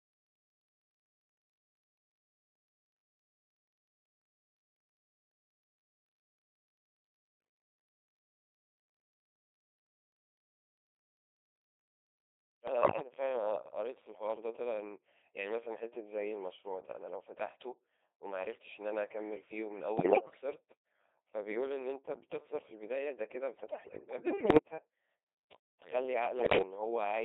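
From start to finish the speech passes through a Codec 2 vocoder, with heavy damage, in a mode consistent with 2.4 kbit/s, band-limited to roughly 300 Hz to 3.7 kHz. Only pitch, voicing, energy and a spectral envelope survive, and the decoder rebuilds the voice from sine waves, hence the steady robotic buzz. Unlike the smearing or swirling of a conventional low-bitrate codec, the original waveform is gone entirely and the voice sounds synthesised.

Bit errors on digital voice radio then hit the vocoder stream five times: 7.26–7.48 s, 12.68–13.12 s, 19.98–20.41 s, 23.70–24.58 s (the longest stretch) and 26.40–26.62 s. Error rates run from about one bit in twenty to one in ten. Each corrupted bit sets a whole frame's pitch, level, voicing or spectrum, so the voice lurches in pitch and loudness and breaks into bleeps, warbles and gibberish. Packet loss would instead leave gaps or repeats.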